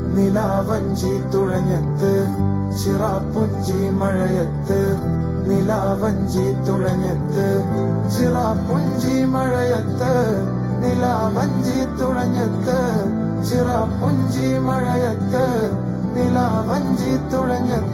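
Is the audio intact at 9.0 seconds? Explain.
No. At 9.0 seconds the sound carries channel delay, which causes comb filtering. This fault runs through the whole clip. One channel arrives a fraction of a millisecond late, roughly 0.2 ms. When the channels are summed to mono, content common to both cancels at evenly spaced frequencies. The first notch sits around 3 kHz, with more spaced evenly above it. The result is a hollow, phasey tone.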